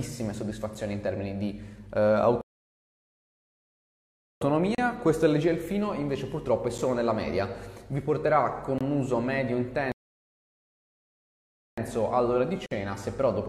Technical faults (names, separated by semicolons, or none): gap between stream segments; playback stall